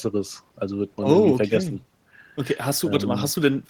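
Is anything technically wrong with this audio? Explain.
No, nothing technically wrong can be heard anywhere in this speech recording.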